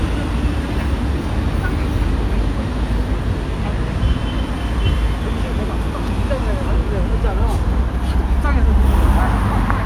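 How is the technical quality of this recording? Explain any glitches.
No technical glitches turn up anywhere in this recording of sounds. Nothing interrupts or distorts the audio at any point.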